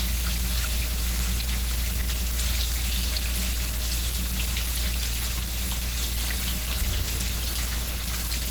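Low-bitrate Opus compression is the likely cause of the damage heard from start to finish. Starved of bits, the encoder appears to have left its music mode for its hybrid speech-oriented coding, which fits a rate of around 16 kbps. The result is plainly audible: the audio sounds muffled and hoarse, with tones turned rough and grainy, while the band still reaches up to about 20.1 kHz and does not narrow.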